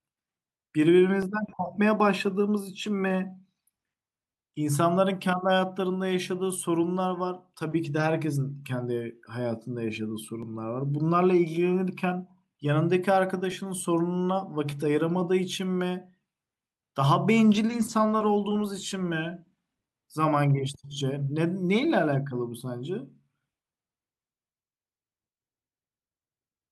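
Sharp single clicks break into the speech at 1.23, 10.43, 13.52, 14.72 and 20.92 seconds. Each is brief and bright, with nothing audibly missing around it. The likely cause is dropped samples. A tiny stretch of the stream, roughly 0.7 milliseconds, goes missing. The waveform then leaps from one value straight to a later one. That sudden step is what produces the click. In a spectrogram each would show as a thin vertical line.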